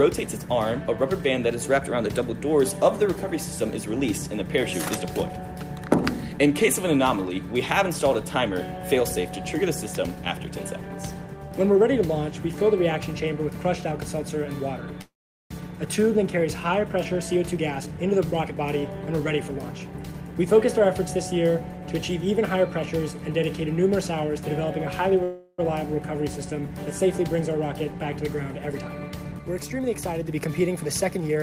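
The audio has two call audio freezes and two stretches of jitter buffer speed-up. From 15.01 to 15.52 s the sound stops and a 0.49 s gap is inserted. A brief continuation of the last sound quickly dies away, leaving about 410 ms of silence. Playback then resumes where it stopped, with nothing lost. The likely cause is delayed packets emptying the jitter buffer. The second freeze, 25.23 to 25.60 s, adds 0.35 s, and there the held sound persists as a fading buzz or hiss with only about 30 ms of silence. Each freeze leaves the stream running later by the length of the pause. From 17.04 to 20.63 s the receiver trims short pitch-period segments repeatedly, so the audio plays at 114% speed with unchanged pitch and sounds hurried, shedding roughly half a second of backlog. The same correction recurs from 28.72 s to the end at 112%, recovering roughly 0.3 s.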